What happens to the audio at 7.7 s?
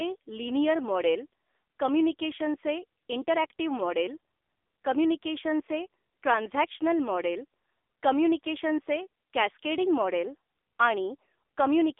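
At 7.7 s the speech carries AMR narrowband mobile codec damage, present throughout the clip rather than a single event. The codec rebuilds the voice from a vocal-tract model excited by sparse pulses per frame, and the heavy, buzzy, synthetic quality fits a low mode around 6.7 kbps. The line band spans roughly 300 Hz to 3.6 kHz. On a spectrogram, energy stops at a flat ceiling near 3.7 kHz with empty space above, and little below 300 Hz.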